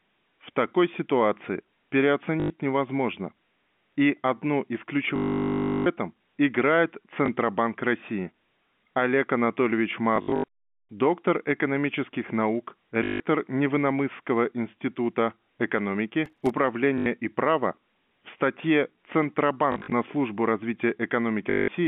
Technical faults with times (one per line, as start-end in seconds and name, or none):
2.40-2.50 packet loss with last packet repeated
5.16-5.86 packet loss with last packet repeated
7.26-7.28 packet loss with last packet repeated
10.16-10.44 packet loss with last packet repeated
13.04-13.20 packet loss with last packet repeated
16.26-16.50 processor overload crackle
16.98-17.06 packet loss with last packet repeated
19.72-19.92 packet loss with last packet repeated
21.50-21.68 packet loss with last packet repeated